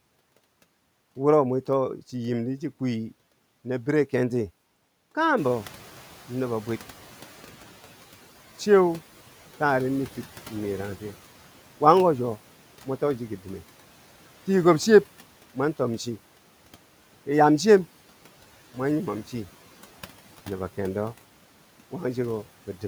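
From 5.37 to 7.74 s the noise suppressor is catching up: room noise rising about 14 dB passes through with less reduction at first, then sinks about 9 dB.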